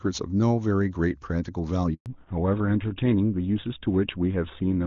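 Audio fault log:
1.94–2.06 s, handover gap: the call switched networks and no speech frames arrived for 120 ms, so the sound fades quickly to silence until the new link starts.
2.06 s to end, fallback to narrowband: the call dropped from HD Voice to an older narrowband codec, so nothing above 4 kHz remains and the speech turns duller and rougher.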